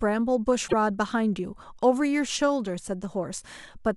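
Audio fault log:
0.67–0.74 s, broken MP3 bit reservoir: the speech jumps forward and the next 70 ms or so decode as garbage, spanning roughly three 26.1 ms frames, before clean playback resumes. The likely cause is frames cut from the stream, so the frames that follow look back into the reservoir for their borrowed data and read bytes from the wrong frame. A simple dropout would leave clean silence with no skip; here the damage follows the jump.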